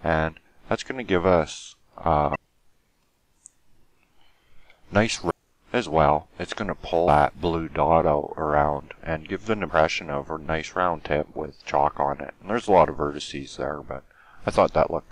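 Four short bursts of damaged data in a compressed stream occur at 2.31–2.36, 5.27–5.31, 7.04–7.08 and 9.66–9.70 seconds. Each lasts about 40 ms. Corrupted bytes make the decoder misread frames and lose sync. Each is heard as a brief chirp, squawk, click or short hole.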